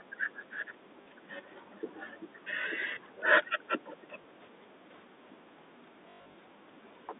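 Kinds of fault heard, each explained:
Packet loss with last packet repeated: lost audio is replaced by replaying the previous packet. A short stutter at 1.02 s and small blips at 2.62 and 4.22 s last 20 to 40 ms, fitting 20 ms packets; between 6.1 and 6.34 s repeated gaps, the longest 100 ms, buzz robotically.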